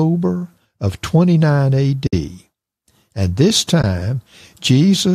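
At 2.07 to 2.13 s the speech drops out for about 60 ms, and at 3.82 to 3.84 s a shorter gap of about 20 ms follows. Both are AAC frame loss with muting. Missing frames were replaced with silence, and the overlapping transform windows fade the signal down and back up at each edge, leaving soft-edged holes. The lengths fit the short 10 ms frames of low-delay AAC, likely AAC-ELD, whose coding leaves only light roughness on the speech.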